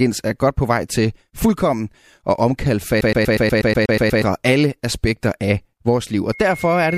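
From 3.01 to 4.22 s, a CD stuck on one turn: a scratch keeps knocking the laser back one track at the same point on each revolution, so the player never advances. The result is a fragment of speech about 0.12 s long (121 ms) played ten times in quick succession, each pass separated by a tiny mute at the jump, giving a rapid, perfectly even mechanical stutter. Normal playback resumes right before "alle aspekter af vores".

At 6.32 s, just after "aspekter af vores liv", loudspeaker feedback squeal sets in. The microphone is picking up the loudspeaker it drives, and at 2.2 kHz the loop gain has passed one, so that single frequency recirculates and reinforces itself on every trip around the loop. It is heard as a steady high tone that swells gradually rather than striking at once, rising to roughly 5 dB above the speech and still sounding when the clip ends.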